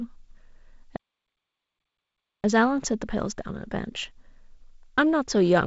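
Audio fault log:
0.96–2.44 s, playback stall: the speech just drops out mid-flow and the output sits completely silent for about 1.47 s before picking up again. That's likely the player running dry of data or its thread getting blocked. The G.722 wideband band edge near 7.7 kHz is unchanged on either side of the gap.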